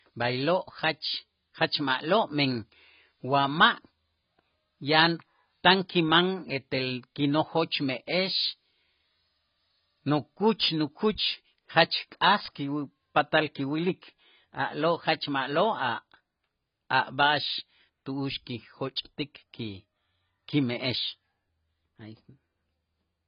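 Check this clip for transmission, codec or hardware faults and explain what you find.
One fault runs through the whole recording: AAC compression. The speech sounds dull and smeared, with a warbling, fizzy texture on sibilants and no content above 5.1 kHz. The likely cause is AAC-LC encoding at a very low rate, consistent with about 16 kbps. At that rate the encoder lowers its cut-off and quantises each frame's frequency lines so coarsely that parts of the spectrum empty out.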